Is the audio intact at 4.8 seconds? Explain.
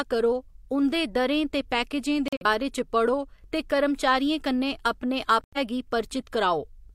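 Yes, the speech at 4.8 seconds plays through intact, with no dropout, click, distortion or other fault at that moment.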